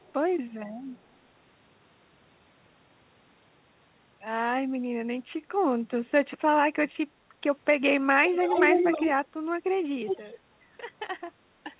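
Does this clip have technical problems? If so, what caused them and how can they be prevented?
Yes. The likely cause is an echo leak: the far end seems to play the call on a loudspeaker, and its echo canceller let part of that sound back into its microphone, returning it about 319 ms late. At 0.0–0.13 s the delayed copy is barely audible, at 8.28–9.11 s it is about as loud as the speech itself, and at 10.06–10.38 s it is only slightly quieter, so the speech appears doubled. It can be prevented by using a headset at the loudspeaker end or retuning its echo canceller.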